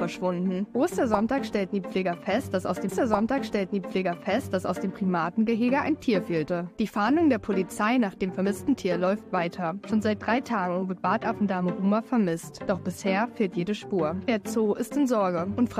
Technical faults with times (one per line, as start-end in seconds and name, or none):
2.88-4.88 stream segment repeated